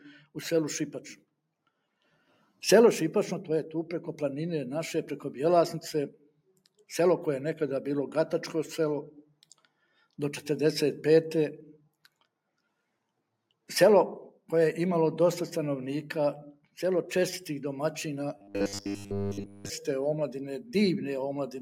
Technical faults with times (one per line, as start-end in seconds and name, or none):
2.02-2.61 sound cut by the noise suppressor
6.10-6.85 sound cut by the noise suppressor
9.17-9.66 sound cut by the noise suppressor
16.54-16.77 sound cut by the noise suppressor
18.38-19.70 robotic sound from repeated short buffers